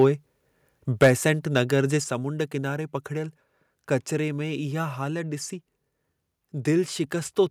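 A speech recording with harsh, crackling distortion on its loudest moments: a brief rasp at 0.00 to 0.04 s, and a much rougher burst from 1.02 to 1.10 s. This is likely microphone overload. The input volume was set so high that the peaks ran past the converter's ceiling, by about 2 dB in the first instance and about 8 dB in the second. The flattened wave tops create the gritty edge. Only a small share of samples is clipped at the start, but roughly a tenth is clipped in the later burst. The level also drops abruptly twice, with both the voice and the background falling together: by about 2 dB at 1.03 s, right inside that distorted peak, and by a further 4 dB at 2.04 s. The cause is likely the microphone volume being stepped down. The call software detected the overloaded input and cut the device's input volume in single jumps rather than a smooth fade, producing audible steps in loudness.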